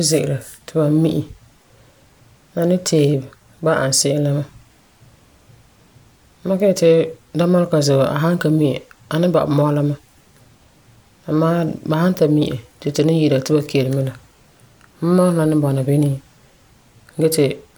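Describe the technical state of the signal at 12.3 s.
At 12.3 s the speech signal is intact, with no audible technical fault at that point.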